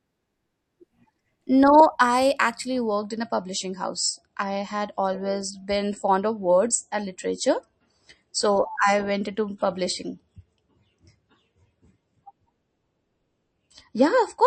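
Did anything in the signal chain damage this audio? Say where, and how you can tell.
Yes. An adaptive stream at a lower bitrate takes over at 2.91 s, right after "I actually", and holds to the end. In the network and codec stage, the player dropped from a higher-rate MP3 to a much leaner one without a gap. Treble vanishes above 8.3 kHz, and smeared, watery codec artefacts thicken, which fits a step from around 128 to 33 kbit/s.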